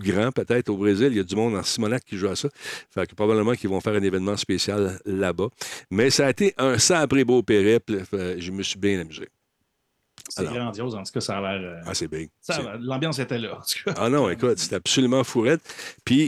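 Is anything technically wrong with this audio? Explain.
No, nothing is technically wrong with this audio.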